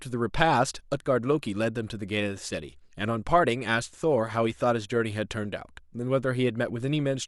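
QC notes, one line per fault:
No faults were heard in the speech. Nothing in this clip needs correction.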